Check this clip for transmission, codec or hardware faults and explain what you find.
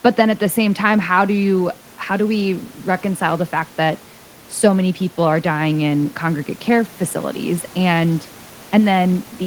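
Nothing stood out on listening to this speech recording, apart from a low background of room noise sitting about 26 dB below the voice, which belongs to the recording space rather than to the transmission chain.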